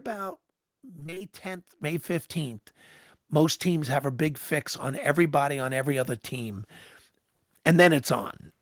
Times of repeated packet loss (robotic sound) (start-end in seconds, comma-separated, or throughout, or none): 0.99-1.22